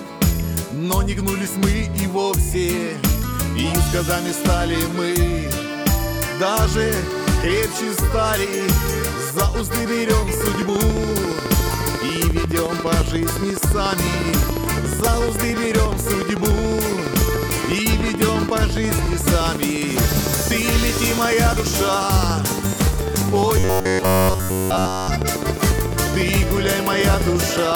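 From 10.34 s to the end at 27.73 s, something is most likely injecting pulses into the signal path, such as interference from nearby equipment or a faulty connection or power supply, producing a train of clicks. They arrive at a steady 14.1 per second, evenly spaced, a few hundred in total, and peak at about 10 dB above the surrounding sound. The effect is a sharp, mechanical ticking laid over everything, including the quieter stretches.

From 23.60 s to 25.08 s, the clicks continue while new audio stops arriving in time. The playback most likely fills the gap by looping the last short buffer over and over, so almost none of the real sound in that stretch gets through. This is robotic sound from repeated short buffers. The repetition imposes a fixed 93.8 Hz pitch, which fits a buffer of roughly 10.7 ms, and turns the sound into a rigid, metallic buzz that only loosely follows what should be there.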